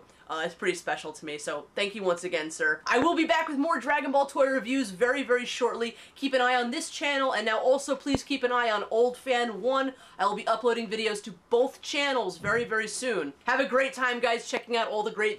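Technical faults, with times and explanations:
3.02–3.04 s, 8.15–8.17 s and 14.57–14.59 s: loud pop. Each is a single sharp pop, about 20 ms long, standing well clear of the sound, which carries on underneath. The first and third peak about 15 dB above the signal, and the middle one about 20 dB. The likely cause is a sudden voltage step, from a switch, static or a driver glitch, that the following circuits shape into a brief, hard pulse.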